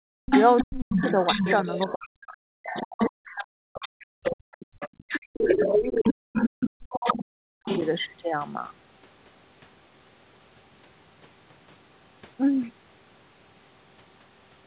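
From 0.04 s to 7.66 s the echo canceller, likely unable to tell the near talker from the far-end sound playing on the loudspeaker, treats the overlap as echo and pulls the level down. The result is speech suppressed in double talk: the talker's speech repeatedly sinks, at its deepest by roughly 40 dB, so that about five seconds in total across that span are ducked or broken into pieces rather than heard cleanly.

Over the same stretch the canceller also fails in the other direction, with the other side's voice leaking through from 0.26 s to 1.93 s and again from 2.63 s to 8.03 s. The far-end sound likely reaches the microphone from the loudspeaker and is not fully subtracted, so a second voice runs under the talker at roughly the same loudness. It competes directly with the talker, all within the call path's narrowband sound, which has nothing above 4 kHz.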